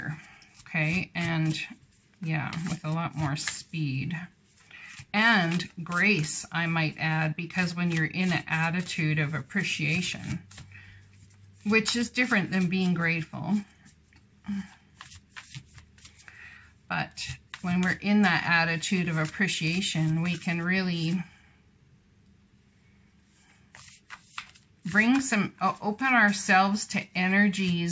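No technical faults occur at any point; the only processing heard is ordinary call microphone handling, with no content above 8 kHz.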